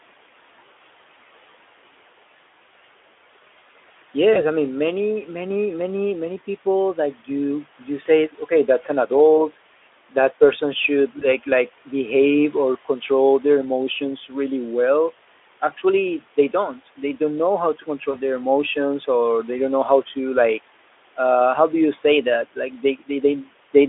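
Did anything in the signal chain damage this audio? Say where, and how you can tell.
Yes, at the network stage: VoIP packet loss concealed by the speech codec, at 4.33–4.43 s before "I mean many many", 8.03–8.07 s after "you you", 11.19–11.25 s, and 18.11–18.19 s before "their emotions or they". Each fits one lost 20 ms frame. The decoder extrapolates the last pitch and filter into a short buzzy tone or coloured noise that fades, and the voice stays smeared briefly afterwards.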